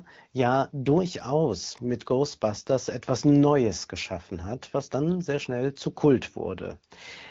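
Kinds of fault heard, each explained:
Nothing here counts as a fault, just speech carried over wideband phone coding at 12.65 kbit/s, which is a rate that codec handles comfortably.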